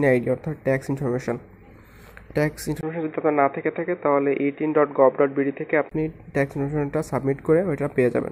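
From 2.81 s to 5.91 s the input likely switched to a poorer device. A 20 ms gap at 2.81 s precedes a dull, boxy sound with nothing above 3.8 kHz and a faint new hiss at much the same level. Full bandwidth returns at 5.91 s.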